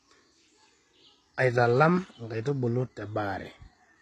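Across the whole recording the speech has a gritty, metallic top end, with s sounds turning lispy and nothing above about 12.3 kHz. This is likely HE-AAC compression at a very low bitrate, near 16 kbps, rebuilding the treble from copied lower bands that don't match the original.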